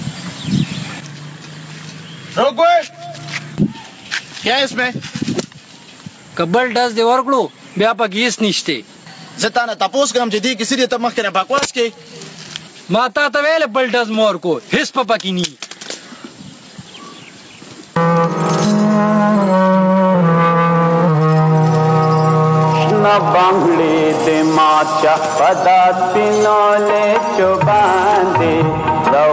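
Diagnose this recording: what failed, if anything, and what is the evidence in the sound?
Gain pumping runs through the whole clip: the gain swings about 20 dB. It's likely input gain cranked far too high at the mic stage, with a fast limiter clamping down and squashing the dynamics.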